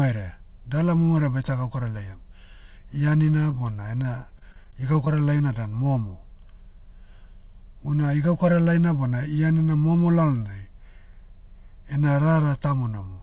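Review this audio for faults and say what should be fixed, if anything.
From 3.43 to 5.56 s the speech turns choppy and robotic. This is repeated packet loss: short holes, none longer than 23 ms, are each patched by extending the previous sound, so about 10% of that stretch is filled in. It differs from a single dropout because the holes recur rapidly rather than leaving one clean silence. The missing content above 4 kHz is separate from this fault; it comes from the narrowband call path. A deeper jitter buffer or forward error correction on the link would prevent it.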